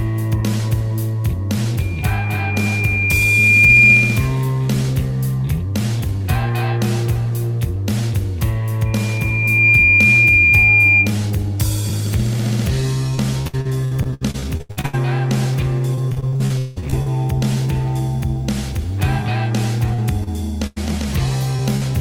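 From 8.85 to 11.15 s a loudspeaker feedback squeal appears. The microphone is picking up its own loudspeaker, and the loop gain passes one at 2.4 kHz. A pure tone swells over roughly 0.7 s to sit about 5 dB above the rest of the sound. On a spectrogram it shows as a single bright horizontal line at 2.4 kHz.

Two stretches of repeated packet loss give robotic sound, from 13.15 to 14.95 s and from 15.95 to 17.08 s. Packets kept arriving lost or late, and each hole was patched by extending the previous sound. The result is choppy, with pieces missing. About a third of the first stretch and about 40% of the second is synthetic fill. The longest holes are 76 ms and 178 ms. A spectrogram shows smeared, frozen harmonic blocks that break up the normal texture.

Short concealed packet loss occurs at 19.94–20.00 s, 20.24–20.29 s and 21.56–21.60 s. Each time, a few tens of milliseconds never reached the decoder in time and were bridged with continued sound. 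These are heard as brief smears or wobbles. In the waveform they appear as slightly too regular slivers.

A burst of packet loss occurs at 20.67–20.78 s, about 100 ms missing, and again at 21.76–21.83 s, about 40 ms missing. The receiver held the last sound and faded it down, so each gap is a decaying buzz or hiss. The sound then resumes further along. In the waveform this shows as a tapering envelope followed by a jump.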